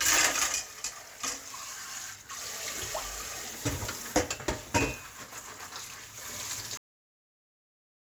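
At 6.77 s the clip has a cut-off end. Whatever's sounding just stops mid-event, with no tail or natural decay, and from there to the end it's flat digital silence. What went wrong is that the final stretch of audio never got written out or played: the last buffers were lost, so the recording ends abruptly partway through a sound instead of finishing it. It's a hard truncation, not a fade.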